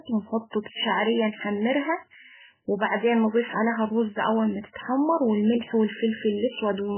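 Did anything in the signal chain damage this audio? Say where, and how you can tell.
Yes, at the codec stage, for the whole of the speech. There is nothing above 3 kHz, so sibilants lose their hiss and the sound is dull and boxy, and the remaining band has a watery, swirling texture. That is heavy MP3 compression, likely from encoding at a very low bitrate, around 8 kbps. Short of bits, the encoder cuts the treble outright and zeroes weak frequency lines, which flicker in and out from frame to frame.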